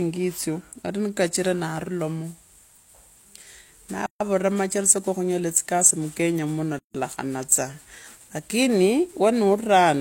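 At 4.06 s the speech drops out for about 144 ms, resuming at 4.21 s, and at 6.78 s it stops again for about 160 ms until 6.95 s. Both silences have softened edges, and the speech picks up exactly where it broke off. These are gaps at joins of encoded pieces: separately encoded segments were spliced without trimming each encoder's leading delay and final-frame padding, leaving that dead air in the stream.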